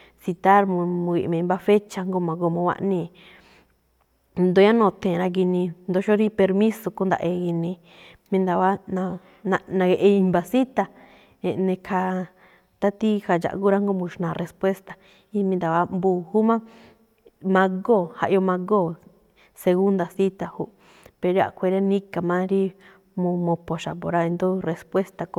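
Speech, with nothing technically wrong with it.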